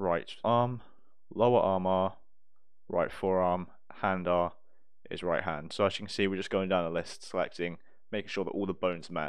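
Nothing technically wrong can be heard in this audio. There is no fault here, so there are no times or causes to give.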